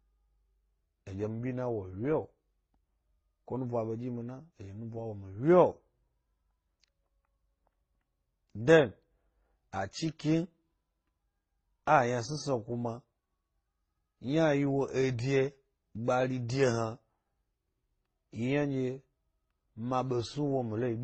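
Throughout the speech, nothing sounds above 8.3 kHz. Smeared, warbling swirls overlap a metallic, phasey upper-band shimmer. Unlike a single codec's one artefact type, this mixture suggests transcoding between lossy codecs, likely MP3, Opus and HE-AAC at low bitrates near 24 kbit/s.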